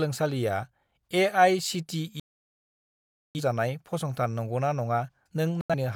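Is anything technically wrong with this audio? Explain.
Yes. The speech drops out to silence twice: from 2.20 to 3.41 s, about 1.15 s of sound gone, and again from 5.61 to 5.75 s, where one gap of about 85 ms falls within about 128 ms. This is a digital broadcast dropout. The receiver lost the signal or rejected corrupted frames and muted until valid frames returned. Everything sent during each gap is simply missing.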